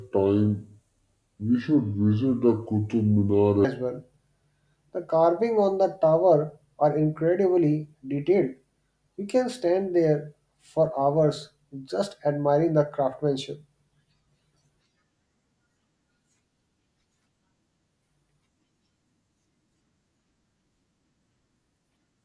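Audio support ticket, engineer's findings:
Speech low, slow and dragged, 0.00–3.65 s. Wrong sample rate: samples clocked out unconverted at roughly 0.69× speed, pitch down about 6.5 semitones, which fits 32 kHz material played at 22 kHz. Check playback device rate configuration and resampler bypass.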